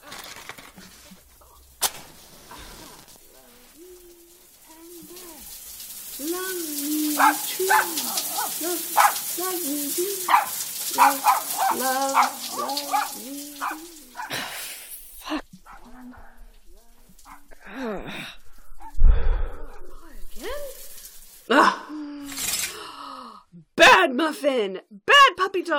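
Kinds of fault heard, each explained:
No technical fault can be heard anywhere in this audio. There is nothing to list under any kind of fault.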